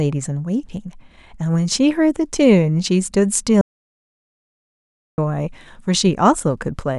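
From 3.61 s to 5.18 s the speech cuts out abruptly and the clip falls into total silence for about 1.57 s before resuming mid-flow. This is an audio dropout to silence, likely caused by the input being lost while the recorder kept writing silence. No room tone survives in the gap, and whatever was spoken there is gone. On a waveform it shows as a flat line, and on a spectrogram as a solid black band with hard vertical edges.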